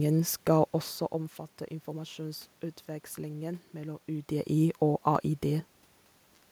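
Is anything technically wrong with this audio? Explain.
Yes. At 5.15 s the speech has a single sharp click, a case of dropped samples. A tiny slice of the stream, about a tenth of a millisecond, is likely missing. The waveform jumps straight to a later value. That step is heard as the click. The level shifts near 1 s and 4 s come from the talker moving, not the system.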